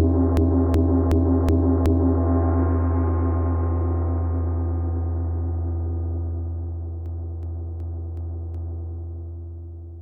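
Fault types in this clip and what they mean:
System hang loop: a 0.37 s piece of sound repeats exactly five times, stuttering at 2.69 Hz, from 0.37 to 2.23 s and again from 7.06 to 8.92 s. The system froze while the hardware kept replaying its ring buffer, which fits a 16384-sample buffer.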